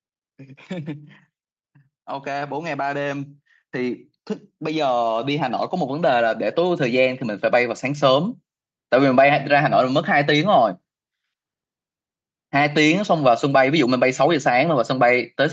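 The automatic gain control twice judged the input too quiet and raised its gain gradually. From 2.23 to 4.07 s the automatic gain rising lifts the level by about 4 dB, then from 4.58 to 8.11 s it climbs by about 8 dB more. The voice and the background noise swell together, so the room seems to creep closer as the speech grows louder, with nothing above 8 kHz throughout.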